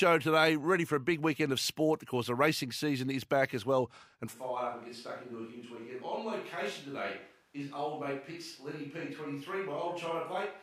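Right after "back as well and", at 4.35 s, the speech abruptly turns roomy and hollow and stays that way to the end. The bass thins out, the level drops by about 10 dB, and room noise comes up to roughly 35 dB below the speech. That sudden change in character points to a switch to a distant microphone, most likely because the close mic's signal dropped out and a farther one, like a camera mic, took over.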